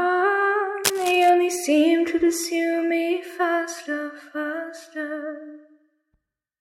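A recording of sounds, with a burst of scratchy, rustling noise from 0.84 to 1.3 s, nearly as loud as the sound itself: cable scratch noise, likely from a worn cable or connector being moved.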